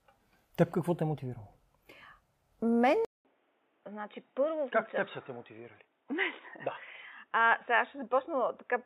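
A speech recording that, at 3.05 s, goes silent for 0.2 s and then returns dull and boxy, with nothing above 3.8 kHz, a slightly lower level, and faint new background noise through to the end. The likely cause is an input switched to a poorer device mid-recording.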